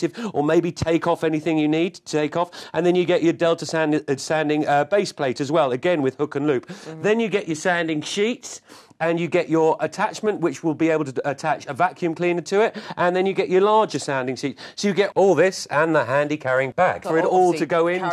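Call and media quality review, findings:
No audible faults found.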